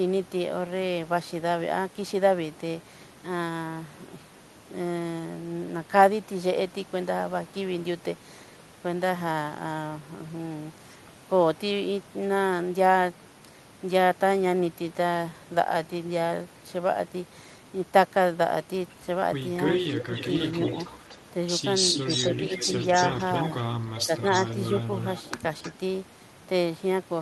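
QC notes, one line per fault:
19.7–21.16 s, 21.95–22.36 s, 22.56–23.25 s, 23.89–25.29 s, 25.62–25.71 s: echo leak. A delayed copy of the speech trails it by about 0.3 s, sliding from 303 to 309 ms. It is likely a far-end speakerphone whose echo canceller let residue through. The copy sits about 10 dB under the speech at first, near equal level at 21.95 s, about 5 dB under at 22.56 s, then about 15 dB under. On a spectrogram, harmonic patterns repeat at a fixed lag. The waveform shows ghost envelopes.
19.97–20.1 s: speech suppressed in double talk. During the first echo stretch the speech dips by up to about 5 dB for roughly 150 ms. This is likely the canceller ducking both signals while it is confused by overlap. It shows as a brief notch in the waveform envelope and a faded band across the spectrogram.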